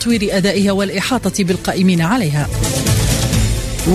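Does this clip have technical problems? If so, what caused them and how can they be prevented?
Yes. Dropped samples at 2.27 s: the audio jumps straight from one point in the waveform to a slightly later one, skipping a handful of samples, under a tenth of a millisecond. That gap is far too brief to remove any sound, but the sudden step in the waveform produces a single sharp click, seen as a thin vertical line across the spectrum. The likely cause is a momentary buffer underrun or a processing hiccup in which a few samples were never written out. To prevent it, use a larger audio buffer and keep the recording or playback system free of competing CPU and disk load.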